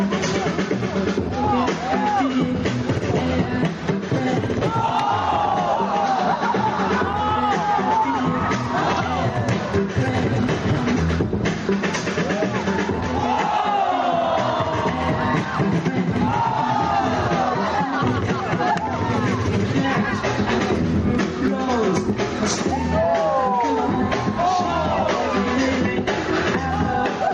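Gain pumping runs through the whole recording. The level swings by around 10 dB, which gives a breathing, see-sawing quality. Loud and quiet passages sit unnaturally close in level, so the dynamics sound flattened. The likely cause is input gain set far too high, with a fast limiter or compressor clamping down on each peak and releasing between them.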